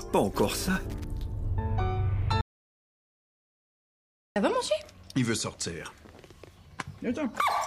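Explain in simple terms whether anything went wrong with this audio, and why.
Two things go wrong. From 0.66 to 1.04 s there is loose connector crackle: an irregular burst of scratchy crackling laid over the sound. A worn or dirty plug or socket is flickering between connected and disconnected as it shifts, chopping the signal in tiny, uneven pieces. Unlike steady hiss or a single click, it is ragged and bunched into a short burst, the way a cable sounds when it is nudged.

From 2.41 to 4.36 s there is an audio dropout to silence. The sound stops abruptly mid-flow and resumes just as suddenly, leaving a gap of about 1.95 s. Whatever happened in that stretch is simply missing. The gap is dead silent, with no faint background or room noise at all. That sets it apart from a quiet pause or a fade, and it points to the input likely being cut off, by a lost connection or a stray mute, while recording carried on.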